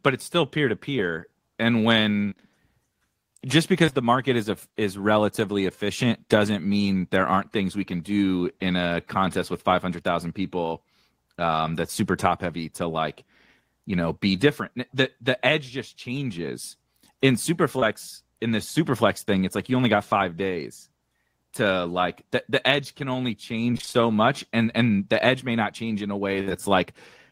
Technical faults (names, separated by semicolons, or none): short concealed packet loss; repeated packet loss (robotic sound); burst of packet loss